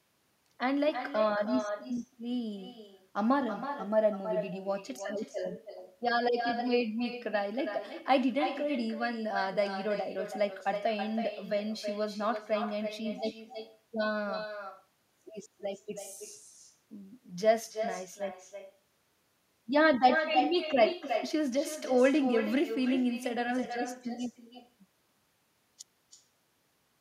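From the start of the speech to the end, every phrase is followed by a second, weaker copy of itself, arriving roughly a third of a second later and sitting about 8 dB below the direct sound. This is echo with no canceller: the far end is playing the call over a loudspeaker, its microphone is picking that playback up again, and nothing in the chain subtracts it before it returns. The copy sounds thinner than the original.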